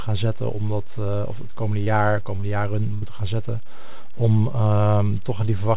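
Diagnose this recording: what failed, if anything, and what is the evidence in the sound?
The analogue front end or converter is adding a constant DC offset, shifting the whole waveform off zero for the entire clip. It isn't audible as such, but it eats headroom and shows as steady energy at the very bottom of the spectrum.

On the network side, short concealed packet loss appears at 1.84 to 1.88 s and twice back to back from 2.36 to 2.44 s. Each gap is about 20 ms of missing audio that the decoder papered over by extending the preceding sound, heard as a brief smear or wobble.

A burst of packet loss from 2.94 to 3.08 s removed about 80 ms of audio. The receiver held the last sound and faded it for roughly 74 ms, so a held buzz or decaying hiss is followed by speech resuming further along, with nothing above 4 kHz throughout, as expected from G.711 mu-law.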